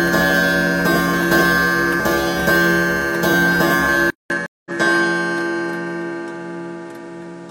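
From 4.10 s the sound goes briefly silent, then returns duller, with nothing above 11.4 kHz and a faint new background noise. This is likely an input switched to a poorer device. At 4.46 s a second gap of 194 ms follows, and the audio resumes about a fifth of a second further on, as a stream reconnect restarts the decoder.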